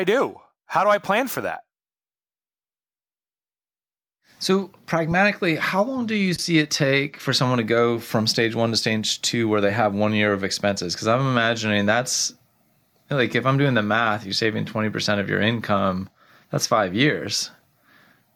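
It's a speech clip with one glitch worth flagging: a corrupt frame decoded at about 6.35 to 6.39 s, right between "how long do you" and "it take for someone". It's a brief glitch peaking around -15 dBFS. What's going on is that a single compressed frame got its bits scrambled and the decoder played it anyway, so misread gains and codes dumped energy into the wrong frequencies for that frame's length.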